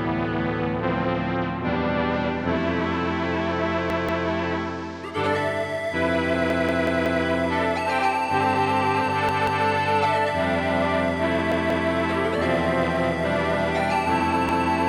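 A repeated buffer occurs at 3.90 to 4.27 s, 6.50 to 7.25 s, 9.29 to 9.66 s, 11.52 to 11.89 s and 14.49 to 14.68 s. New audio arrived late, so playback looped the last block. Each block lasts about 186 ms, which fits an 8192-sample buffer. The block sounds twice more at most points, four more times at 6.50 s, and once more at 14.49 s. Each repeat starts with a hard join. The result is a short stutter.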